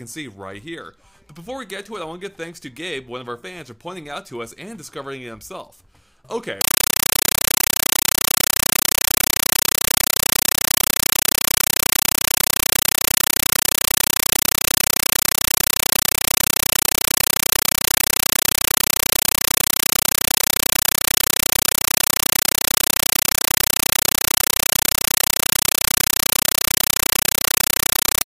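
From 6.61 s to the end at 28.26 s, a Dolby Digital (AC-3) stream is treated as ordinary samples, a compressed stream played as audio. Each undecoded frame becomes an 8 ms noise burst then silence, repeating 31.25 times a second, heard as loud chattering static.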